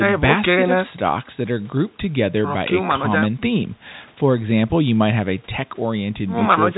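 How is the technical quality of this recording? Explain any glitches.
No glitches turn up here: it's ordinary telephone-band speech from G.711 coding, with nothing above about 3.9 kHz, and there's nothing to flag.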